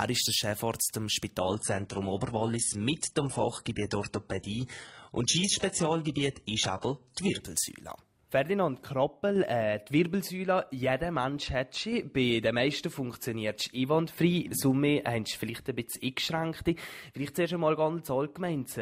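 From 1.40 s to 7.40 s the adaptive stream switches to a lower bitrate, apparently because the connection could not sustain the original rate. The change is abrupt and leaves no gap: the top end loses its real detail and nothing survives above 11.1 kHz. That sound points to a drop from a clean AAC stream around 96 kbit/s to a very lean HE-AAC stream near 12 kbit/s.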